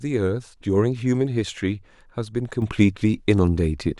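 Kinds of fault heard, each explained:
Sudden gain jump: from 2.62 s, speech and background noise rise together by about 6 dB until the end, likely an unramped digital gain change.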